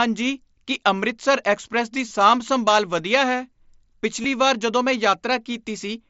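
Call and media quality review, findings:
Concealed Bluetooth headset packet loss, headset-to-phone link, 2.08–2.11 s and 4.22–4.24 s. Voice packets dropped; receiver patched each gap, about 22.5 ms (fits three lost frames), by repeating best-matching recent waveform over the mSBC stream. Brief buzzy held tone, slight warble as real speech resumes.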